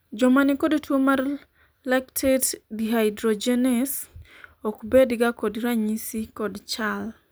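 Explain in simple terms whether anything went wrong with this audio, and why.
Nothing went wrong with this audio: the speech comes through without any fault to hear.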